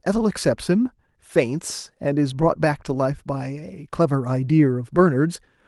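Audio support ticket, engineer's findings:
No faults heard; speech over call path as expected.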